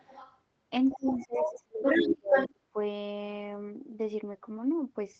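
From 0 to 0.4 s a faint second voice, about 20 dB below the talker, runs underneath: the other side's voice leaking through, likely from loudspeaker echo the canceller left in the microphone. On a spectrogram it appears as a weaker, overlapping set of harmonics. The leak returns at 0.86–1.62 s at roughly equal level, then at 1.83–2.15 s and 2.31–2.5 s slightly louder than the talker.

Overlapping those stretches, the talker is hit by speech suppressed in double talk at 0.93–1.84 s, 2.01–2.36 s and 2.52–2.77 s. The level falls by as much as about 30 dB, likely because the canceller couldn't separate the talker from the echo and turned both down. The waveform shows deep notches cut into the envelope, and the spectrogram shows gaps and a thinned upper range.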